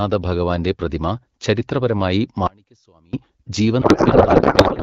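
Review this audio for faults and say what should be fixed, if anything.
From 2.47 to 3.13 s there is an audio dropout to a faint residue. The source feed was likely lost for about 0.66 s while the path downstream stayed live. The speech cuts out abruptly, leaving only a faint trace about 30 dB down, then snaps back. Monitoring the input link and failing over quickly when it drops would prevent this.

From 3.81 s to the end there is a codec payload misread. Octet-aligned AMR frames are being parsed as bandwidth-efficient, so every field lands in the wrong place. The AMR-WB decoder, running at 12.65 kbit/s with only light codec damage, then puts out garbled, warbling noise that barely follows the speech. Making both ends negotiate the same octet-align setting would prevent this.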